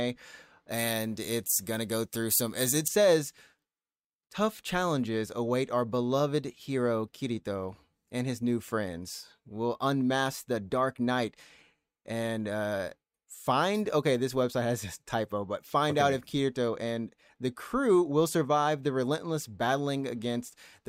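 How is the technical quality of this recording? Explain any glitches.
There's one clear glitch: from 0.69 to 2.88 s, pre-emphasis was left on. The treble boost, matching an FM 75 µs curve, never got its de-emphasis cut. That leaves about 13 dB extra at 10 kHz, so the speech sounds thin, bright and sibilant.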